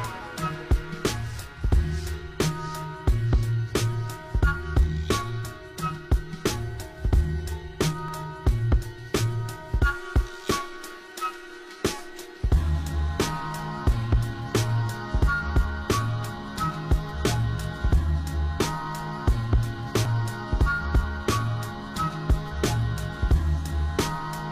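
A short audio recording shows overlap between stream segments: brief skips near 8.08 s and 20.05 s, each losing roughly 30 ms, which fits 4-second segments. Unlike a dropout, there is no silent gap, only an abrupt jump.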